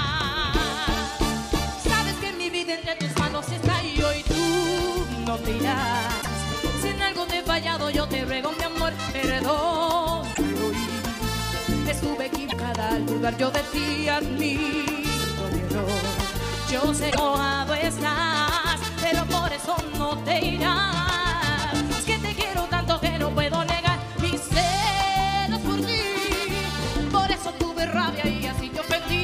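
Short glitches from damaged data in a compressed stream occur at 6.18, 10.31, 12.45 and 17.10 s, where corrupted frames knock the decoder out of sync for about 70 to 100 ms.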